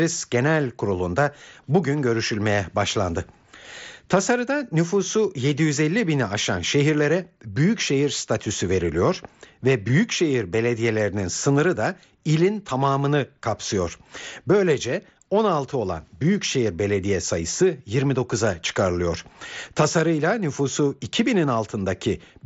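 No technical faults are audible.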